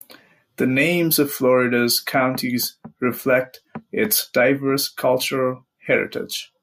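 No technical faults can be heard in this speech recording. Nothing in the audio points to a problem anywhere along its path.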